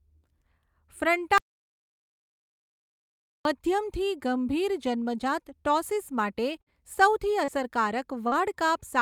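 Audio dropout to silence runs in this speech recording from 1.38 to 3.45 s, where the sound cuts to silence with no room tone for about 2.07 s and returns mid-flow on "મધ્યમથી ગંભીર જન્મજાત". The likely cause is a lost input, such as a disconnected device or brief mute, while the recorder kept writing silence. A burst of packet loss follows at 6.61 to 6.69 s. About 60 ms of audio never arrived, and the receiver stretched the last sound across roughly 51 ms, fading it into a held buzz or hiss before the speech resumes further along with that stretch missing. Short concealed packet loss appears at 7.44 to 7.51 s and 8.28 to 8.35 s, each time with 40 ms missing. The decoder papered over the holes with about 32 ms and 38 ms of continued pitch or shaped noise, heard as a brief smear or wobble. Within those same moments, at 7.48 to 7.50 s and 8.32 to 8.34 s, a lost packet was rebuilt from error correction. 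The decoder played the low-bitrate backup copy carried in the following packet, so there is no gap, but those 20 ms frames sound rougher and noisier than the surrounding audio.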